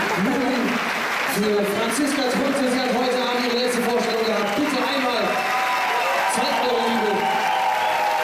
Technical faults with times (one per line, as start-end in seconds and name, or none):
none